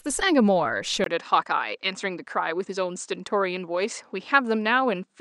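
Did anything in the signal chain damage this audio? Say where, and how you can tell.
Yes. At 1.04 s, a 20 ms gap, then nothing above 9.2 kHz and faint new hiss at steady level: likely input switched to a poorer device.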